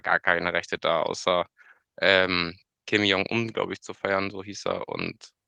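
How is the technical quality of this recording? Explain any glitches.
There is one glitch, a lost packet rebuilt from error correction, between 0.75 s and 0.81 s in the speech. The sound points to a single lost packet. The packet after it carried a low-bitrate backup copy, and the decoder played that copy in place of the missing audio. That is why there is no dropout or silence. The rebuilt stretch covers about 20 ms and sounds briefly rougher and noisier than the surrounding speech.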